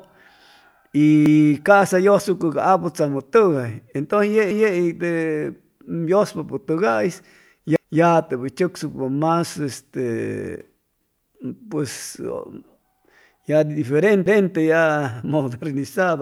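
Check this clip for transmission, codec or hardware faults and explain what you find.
One fault is present: overlapping chunks. The speech was handled in 3-second blocks, each starting before the previous one ended, so 250 ms replays at every join: 1.26, 4.51, 7.76, 11.01 and 14.26 s. Each join stutters, the first just before "ca'sa yʉsucʉ ca".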